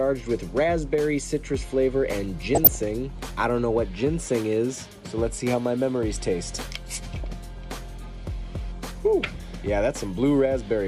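From 2.55 to 2.81 s there is DAB burbling. Bit errors in weak reception slip past error correction into the MP2 audio data. Corrupted samples put short blips of noise in single sub-bands, and corrupted scale factors make sub-bands jump in level. The result is a burbling over the audio. It returns from 7.24 to 7.33 s as a shorter burst. Both bursts point to roughly a dozen damaged frames each, which fits an error rate of a few tenths of a percent.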